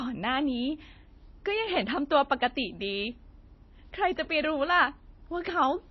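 From start to finish the speech carries plainly audible coding damage, likely from MP3 compression at a low bitrate, in the region of 24 kbps. Starved of bits, the encoder discards everything above 5.8 kHz, so the top end is dull and sharply capped. Weaker frequency components are dropped and restored from one frame to the next, which gives the audio a watery, swirling texture, and the starts of sounds are smeared.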